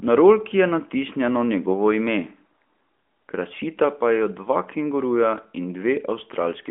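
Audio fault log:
No faults heard anywhere in this speech recording.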